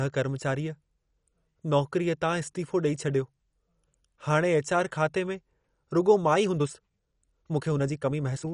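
Throughout, the speech sounds dull and gurgling, with a granular, flickering spectrogram cut off above 11.3 kHz, likely MP2 compression at a low bitrate. From 6.31 s to the end, a rushed passage runs 1.36 times faster at unchanged pitch, likely a time-stretched section, its waveform showing tighter syllable spacing.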